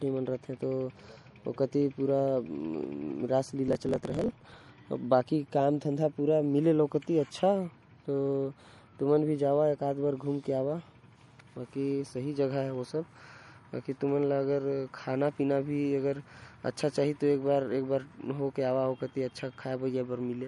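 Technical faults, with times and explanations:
throughout: MP3 compression, likely the cause of the watery, swirly texture that's plainly audible the whole way, with nothing above 11.2 kHz. Running short of bits, the encoder drops weak frequency lines frame to frame and trims the top end, which fits a low bitrate around 47 kbps.
3.66–4.68 s: block size mismatch (truncated). There's a 43.1 Hz buzz and the audio runs about 1.12 times fast, because each block loses its tail before the next stage reads it. The buzz rate fits a 1024-sample read size, with the writer's blocks about 12% longer.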